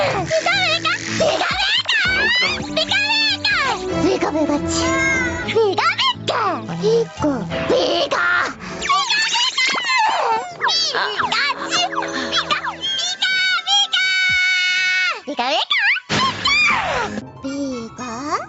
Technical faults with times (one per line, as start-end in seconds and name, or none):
0.00-18.48 gain pumping